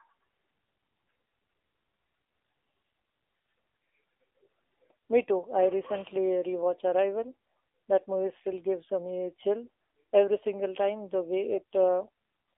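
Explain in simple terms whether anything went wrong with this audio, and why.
AMR narrowband mobile codec damage runs through the whole recording, from the first second to the last. The speech was squeezed through the kind of coding used on older mobile phone calls, which keeps only a narrow slice of sound, roughly 300 Hz to 3.6 kHz, so everything sounds thin and muffled. Running at a low data rate, the codec rebuilds the voice from a rough model, giving it a plainly audible buzzy, synthetic edge.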